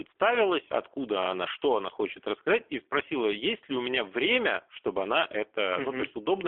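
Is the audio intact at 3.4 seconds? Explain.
No. At 3.4 s, as across the whole clip, the speech carries plain G.729 codec damage. The codec does not store the waveform. It rebuilds each 10 ms frame from a vocal tract filter, a pitch predictor and a few pulses, a budget consistent with an 8 kbit/s stream. That gives the speech a rough, synthetic edge. The band is also held to about 300 Hz to 3.5 kHz, so the sound is thin and telephone-like.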